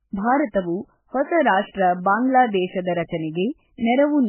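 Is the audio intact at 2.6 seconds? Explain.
No. At 2.6 seconds, as across the whole speech clip, nothing is present above 3 kHz, and smeared, watery low-rate artefacts sit under a second layer of coding noise. This sound points to a very low-bitrate MP3 stage likely followed by transcoding between lossy codecs into a higher-rate WMA pass.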